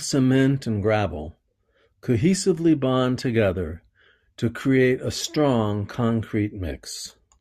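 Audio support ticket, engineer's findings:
Findings: no fault found in the speech audio.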